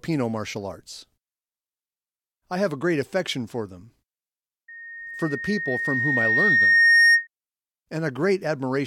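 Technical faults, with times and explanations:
4.68–7.27 s: loudspeaker feedback squeal. The microphone picks up its own loudspeaker, and at 1.8 kHz the loop gain exceeds one, so that tone feeds on itself. It swells over about two seconds to roughly 10 dB above the speech before stopping.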